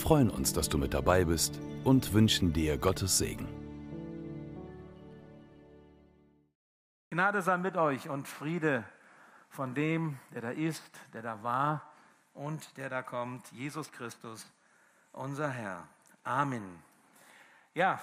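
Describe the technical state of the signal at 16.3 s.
At 16.3 s the signal is intact, with no dropout, distortion, clicks or other technical fault audible at that point.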